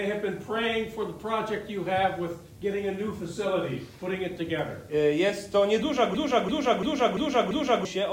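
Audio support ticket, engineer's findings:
Video or display buzz, whole clip. 75 Hz buzz with hash above, around 30 dB under the signal. Screen or video cable coupling into the audio line at the field rate. Spectrogram: steady 75 Hz line plus harmonic comb and broadband fuzz across the full length.

System hang loop, 6.14 to 7.85 s. One 341 ms segment repeats exactly five times, a machine-gun stutter at 2.93 Hz. Probable driver or OS freeze while hardware kept cycling its ring buffer; the loop length fits a 16384-sample buffer. About 1.5 s of audio lost. Waveform: identical repeating blocks.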